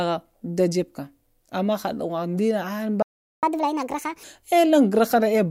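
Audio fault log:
3.02–3.43 s, playback stall: The speech stops dead in mid-flow. Silence follows for about 0.4 s, roughly 403 ms. The player likely ran out of buffered data, or its output thread was held up, so nothing reached the output. When sound returns, it picks up where it stopped. Nothing is skipped. The gap is long enough to break the rhythm clearly.
3.43–4.24 s, catch-up at higher speed: Right after the gap, the speech runs fast. It plays at 1.5 times normal speed. Pitch rises with it, by about seven semitones. The player is working through its backlog by resampling, and that shifts timing and pitch together. The result sounds hurried and chipmunk-like. After roughly 0.8 s the lost time is recovered. Speed and pitch then drop back to normal.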